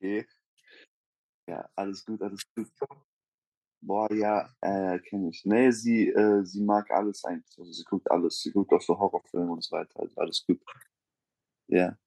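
The automatic gain control judged the input too quiet and raised its gain twice, by about 7 dB from 3.8 to 5.83 s, then by about 4 dB from 6.61 to 8.56 s. Each automatic gain rise makes speech and background swell together over roughly two seconds.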